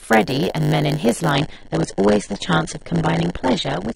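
A block size mismatch (padded) runs throughout this speech: short zero-filled gaps in every block cause a 100 Hz buzz, and delivery is slowed to 0.919 of normal speed. An adaptive stream at a lower bitrate takes over from 1.31 s to the end. The quality drops suddenly without a gap, nothing remains above 9.8 kHz, and the coding artefacts grow, which fits a switch from about 96 to 32 kbit/s AAC.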